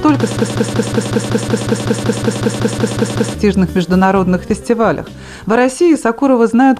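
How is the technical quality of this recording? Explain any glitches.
The recording has one serious glitch, a system hang loop from 0.37 s to 3.34 s. The playback or capture system froze while the audio hardware kept replaying its ring buffer, so one 186 ms slice repeats exactly 16 times at about 5.4 per second, which fits an 8192-sample buffer. This long buffer produces a machine-gun stutter, and around three seconds of sound are lost. Unlike random dropouts or jittery stuttering, every repeat is identical and evenly spaced.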